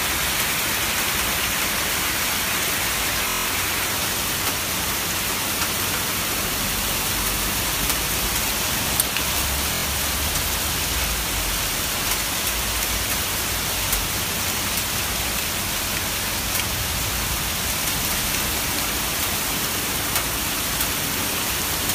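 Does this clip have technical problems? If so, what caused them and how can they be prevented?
Yes. Bluetooth stutter occurs at 3.29 to 3.46 s and again at 9.74 to 9.84 s. Late or lost wireless packets made the receiver keep replaying its last short slice, giving a buzzing stutter, then the sound jumps ahead, skipping about 160 ms and 90 ms respectively. Keeping the source close to the receiver, free of obstructions and away from busy 2.4 GHz interference prevents these dropouts.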